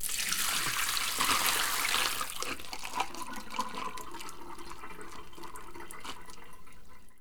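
No dropouts, clipping, glitches or other transport faults are audible anywhere in this recording of sounds.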